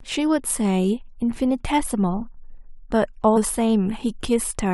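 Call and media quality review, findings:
Damaged data in a compressed stream at 3.36 s. Brief blip in the speech, under 20 ms. Probable component: decoder input. Corrupted bytes in the compressed frames there; decoder misreads them, loses frame sync, then recovers at the next valid header.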